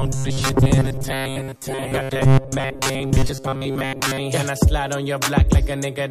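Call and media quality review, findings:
Robotic sound from repeated short buffers, 0.01 to 4.2 s: rigid metallic buzz at 134 Hz, following the sound only loosely. Likely jitter buffer underrun; playout repeats a block of about 7.5 ms, skipping most of the real audio throughout.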